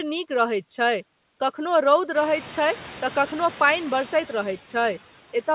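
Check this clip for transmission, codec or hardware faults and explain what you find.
One fault runs through the whole clip: noise suppressor artifacts. The suppressor estimates the steady background in each frequency band and pulls it down frame by frame, here by about 10 dB. That gating makes the noise sink in the pauses and swell back up under the speech. The effect is strongest after the room's own noise rises by about 13 dB at around 2 s, where it sits only about 19 dB below the speech and the suppressor has more to remove.

Nothing is heard above 4 kHz, consistent with the G.711 A-law call path at 64 kbps. That band limit is part of the codec, not a fault.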